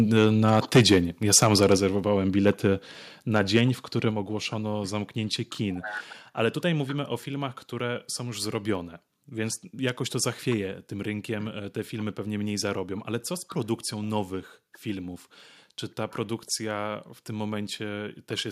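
From 0.16 to 0.98 s the loudest syllables turn harsh and crackly, with peaks driven about 10 dB past the converter's limit and a few percent of samples flattened. This is microphone overload, likely from input volume set too high for the converter. At 0.77 s, still inside that stretch, the speech and its background drop suddenly by about 2 dB, a microphone volume stepped down, likely the call software cutting the device's input gain after the distortion. The same pattern repeats with shrinking overloads: clipping from 1.33 to 1.75 s (about 6 dB over, a few percent of samples) then a drop of about 4 dB at 1.77 s; clipping from 2.47 to 2.67 s (about 3 dB over, under one percent) then about 2 dB down at 2.79 s; and a lighter crackle from 3.36 to 3.59 s (about 2 dB over, under one percent) before a final step of about 4 dB at 4.11 s, just before "ogłoszono zamknięcie kin".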